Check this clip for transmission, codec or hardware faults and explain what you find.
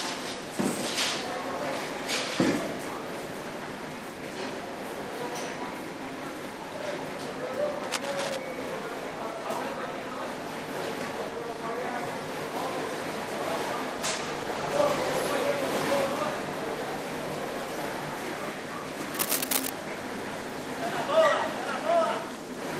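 Three faults stand out: two bursts of cable scratch noise and one call bitrate drop.

From 7.83 to 8.38 s, and again from 19.14 to 19.70 s, a rough scratching rustle sits on top of the sound. The likely cause is a worn cable, connector or control being moved. Its contact resistance jumps around, and that adds dense, irregular noise. The first burst is a little quieter than the sound. The second is about as loud as the sound itself.

From 13.96 to 15.39 s, the sound turns coarse and watery, with less high-frequency detail. This is a call bitrate drop. The call's bandwidth estimate fell, so the encoder was told to spend fewer bits. The change fits a cut from 32 to 16 kbps. The lowest rate lasts about 1.36 s. Then the bitrate recovers and the detail returns.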